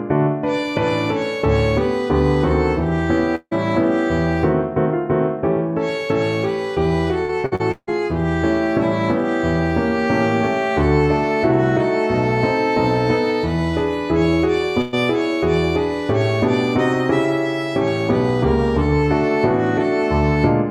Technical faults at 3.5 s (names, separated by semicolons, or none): long network dropout